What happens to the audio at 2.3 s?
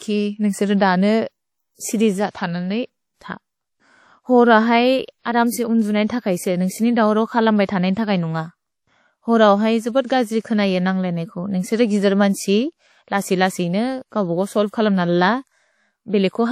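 A short hiss fills 2.30 to 2.35 s, just before a sharp attack that arrives smeared and soft. This is pre-echo: the codec spread quantisation noise across a 46 ms block, so the quiet gap before the attack caught noise meant for the loud part. Around that moment the sound is ringing and washy, with a hiss that breathes with the signal and no content above 16 kHz. This is likely WMA compression at a low bitrate, consistent with around 48 kbps.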